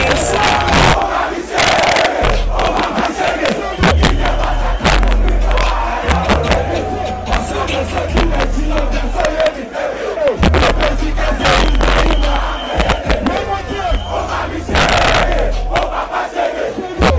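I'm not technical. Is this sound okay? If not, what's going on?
No. The problem is integer overflow, and it runs through the whole clip. The sound was pushed louder than the system's numbers can hold. Instead of stopping at the top, the loudest moments flip to the opposite extreme. Only a small share of the sound goes over, just the loudest peaks. Those peaks come out as harsh, sudden cracks, much sharper than ordinary distortion. The clip also passed through a call connection, which keeps nothing above 8 kHz.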